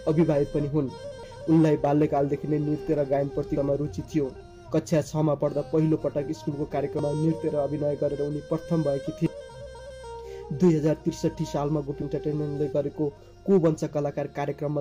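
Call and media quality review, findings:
Damaged data in a compressed stream: brief defect at 1.23, 3.57, 6.99 and 9.26 s, each a few milliseconds. Component: decoder input (file/stream bytes). Mechanism: corrupted bytes make a frame misdecode, and the decoder loses sync and hunts for the next frame header. Distinguishing cue: isolated few-millisecond events, not continuous degradation.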